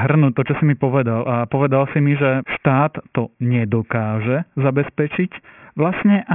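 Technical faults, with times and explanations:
Throughout, aliasing: the speech was resampled down without an anti-alias filter, so energy above the new Nyquist limit folds back around 3 kHz, which fits a rate near 6 kHz. Sibilants become gritty and metallic, with false tones roughly 15 dB below the speech.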